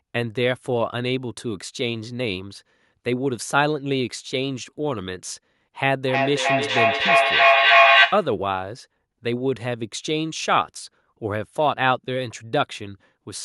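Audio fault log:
6.06–8.39 s, feedback echo between two devices: the speech comes back roughly every third of a second, repeating and building rather than fading, peaking about 8 dB above the speech. A second device replays this microphone's signal, which is picked up again, outside either echo canceller.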